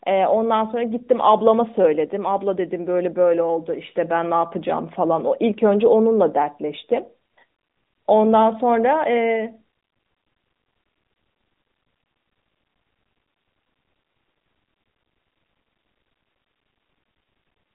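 Nothing goes wrong anywhere in this speech clip; it simply has the narrow telephone-style band of a mobile call, with nothing above about 3.8 kHz.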